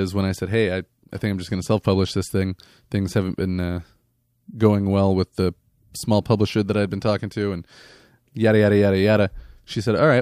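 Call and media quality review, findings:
Clock slip clicks, 0.80–9.71 s: faint ticks at a steady interval of roughly 0.7 s, about fifteen in all, each a single-sample jump. Likely free-running clocks between two devices, about 30 ppm apart. Strictly regular spacing separates it from random packet-loss clicks.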